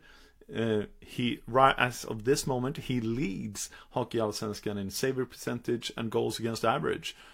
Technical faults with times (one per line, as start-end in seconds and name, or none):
none